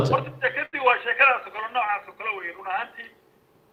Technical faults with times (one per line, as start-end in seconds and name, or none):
0.65-0.75 short stall from a late packet